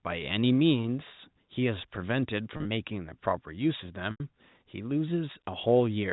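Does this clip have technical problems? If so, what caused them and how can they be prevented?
Yes. At 2.57 to 2.65 s the speech briefly turns buzzy and held, and at 4.11 to 4.20 s a longer held tone fades into a short silence before the speech cross-fades back. Both come from packet loss with pitch repetition. The receiver fills missing audio by repeating the last pitch period and fading it over about 50 ms. The first gap is 60 ms lost across 80 ms, never more than 30 ms in a row, so only the buzz is heard. The second is 90 ms of continuous loss, which outlasts the fade. A steadier network path with a jitter buffer and forward error correction would prevent these losses.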